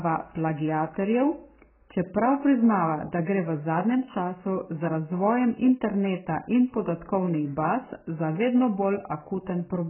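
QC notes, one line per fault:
throughout, AAC compression. Nothing is left above 3.1 kHz, so the speech sounds dull and muffled. Heavy coding damage smears the sound, leaving a warbling texture on sustained sounds and fizzy sibilants. The likely cause is AAC-LC coding starved of bits, which fits a bitrate near 8 kbps.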